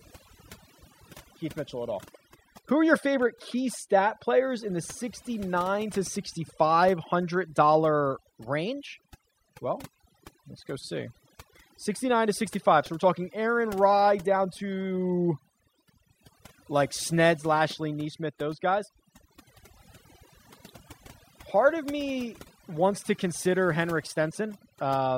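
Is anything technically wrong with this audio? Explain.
Yes. Throughout the speech, overdone noise removal is audible. The noise reduction was set too strong. It drops individual frequency bands near its noise estimate, taking quiet parts of the voice with them. The background drops and breaks up into twinkling specks.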